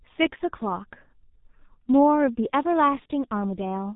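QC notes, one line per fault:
throughout G.723.1 codec: the speech was squeezed through a low-rate telephony codec, which fits about 6.3 kbit/s, with heavy damage. Nothing above 3.8 kHz survives, so it sounds muffled, and the slow 30 ms frame updates leave it hoarse with smeared consonants.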